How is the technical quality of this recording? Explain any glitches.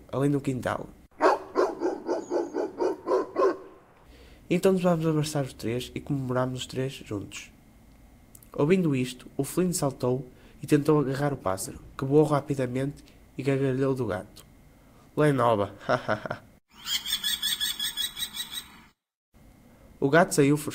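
There's one real glitch, a call bitrate drop from 10.85 to 12.05 s. The call's bandwidth estimate fell, and the encoder got squeezed hard. What you hear fits a plunge from something like 128 kbps down to about 16 kbps, sitting at the bottom for roughly 1.1 s. At that rate Opus codes everything much more coarsely and trims off the top end, so the sound goes muffled and rough and watery until the bitrate climbs back.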